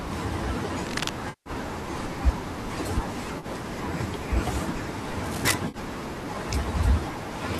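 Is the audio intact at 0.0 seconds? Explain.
Yes, the speech is intact at 0.0 seconds, with no fault present at that moment.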